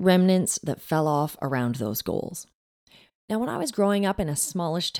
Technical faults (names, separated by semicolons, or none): sudden gain jump